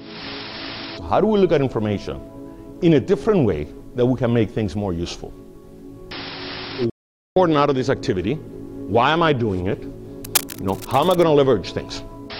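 At 6.90 s the player most likely ran dry of buffered data, or its output thread was held up, and it had nothing to send to the output. This is a playback stall: the sound breaks off in mid-flow and the output sits silent for about 0.46 s, until 7.36 s, when playback recovers and the audio carries on. The gap is long enough to hear clearly as a dropout rather than a click.

From 10.24 s to 11.23 s a worn cable, connector or control was likely being moved, so its contact resistance jumped about rapidly and modulated the signal passing through it. That gives cable scratch noise: dense, irregular bursts of crackling and rustling laid over the sound for roughly a second. The scratching is strong, only around 5 dB below the sound itself, so it sits prominently on top rather than in the background.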